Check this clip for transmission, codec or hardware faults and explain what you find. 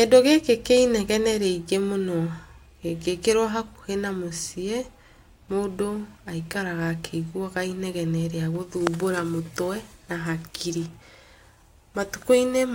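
One fault is present in the speech: a bit error spike at 9.07 s. A single sample jumps to about -12 dBFS and immediately returns, the signature of one flipped bit in memory or on a digital link pushing the sample value off by a power of two. Because the disturbance lasts one sample, its energy spreads across the whole spectrum, and it is heard as one sharp, isolated tick with no relation to the surrounding speech.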